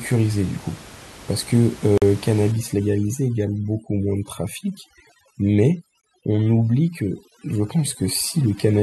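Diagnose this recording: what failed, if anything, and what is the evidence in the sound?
At the streaming playback stage, segment timestamps left gaps between stream segments that were filled with silence: hard-edged holes at 1.98 to 2.02 s (44 ms) and 6.01 to 6.03 s (21 ms), four seconds apart.

In call processing, overdone noise removal from 2.52 s to the end suppresses bands near the room noise floor, leaving a reduced, twinkling background.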